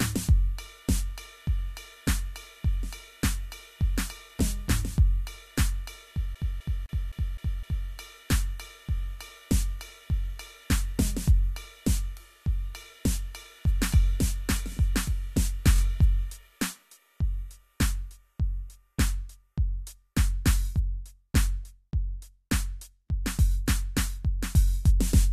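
From 6.35 to 7.89 s the music sticks like a CD stuck on one turn. The same 0.26 s slice plays six times, with a brief mute at each jump as the laser falls back a track. The long, even loop and the gaps set it apart from the codec stutters that follow.

Repeated frames occur at 8.97 to 8.99 s and again at 15.75 to 15.79 s. A 23 ms block, which fits one compressed frame, plays one extra time at the first point and two extra times at the second. The first adds 23 ms to the music and the second adds 46 ms. Each is heard as a tiny stutter with no silence around it, far shorter than the CD loop.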